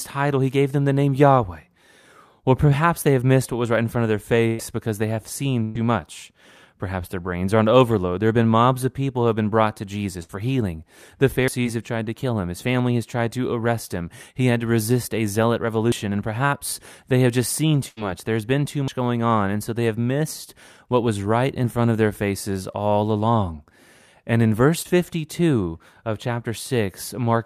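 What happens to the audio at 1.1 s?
Nothing goes wrong at 1.1 s; the speech plays through that moment intact, with no dropout, click or other audible fault.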